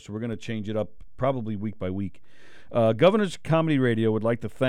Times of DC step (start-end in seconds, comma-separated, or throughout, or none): 0.33-4.69